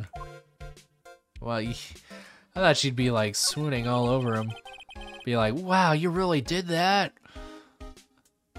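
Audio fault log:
Nothing stood out on listening.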